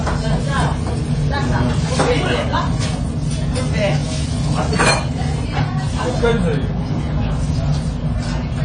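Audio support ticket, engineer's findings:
Dull, smeared audio across the whole clip. Nothing above 9.9 kHz. Warbling, fizzy texture on sustained sound and hiss-like content. Codec damage plainly audible throughout. Likely cause: AAC compression, AAC-LC profile. Encoder quantising its frequency lines against a hearing model with too few bits. It drops the top band entirely and starves the upper mids, leaving holes and smear. The damage fits a low bitrate, around 24 kbps.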